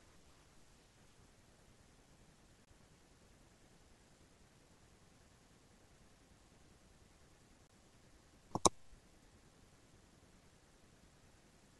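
At 2.65 to 2.67 s and again at 7.67 to 7.70 s, the speech is broken by a gap between chunks: a hole of about 23 ms with abrupt edges on both sides. The audio was joined from segments spaced 5.0 s apart, and silence was inserted at each join rather than the segments butting together. Nothing appears to be lost, but the flow stops dead for an instant, heard as two brief, hard-edged dropouts.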